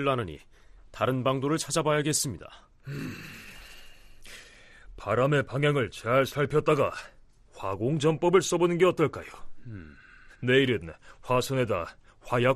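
Throughout the speech, the sound is dull and gurgling, with a granular edge. This is likely MP2 compression. Too few bits leave upper sub-bands switched off and the rest coarsely quantised. The damage is plainly audible and fits a rate near 80 kbps.

At 8.09 s, a brief patch of DAB burbling breaks through. A small share of bit errors slipped past error correction into the audio data. The sound points to a few damaged frames.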